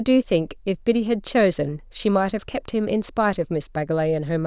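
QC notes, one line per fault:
No faults found in this speech clip.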